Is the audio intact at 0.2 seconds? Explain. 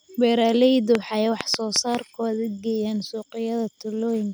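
Yes, at 0.2 seconds the speech plays through intact, with no dropout, click, distortion or other fault at that moment.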